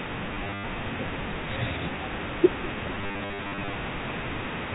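Packet loss with last packet repeated hits from 0.34 to 0.64 s and again from 2.95 to 3.75 s, with gaps scattered rather than continuous: 190 ms lost in the first stretch and 490 ms in the second, the longest runs 100 ms and 50 ms. Each gap is filled by replaying the previous packet out of step with the pitch, so runs buzz near 100 Hz, fitting 10 ms packets. The result is a short robotic stutter in the narrowband telephone speech.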